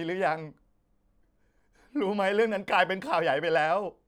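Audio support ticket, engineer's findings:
No faults detected.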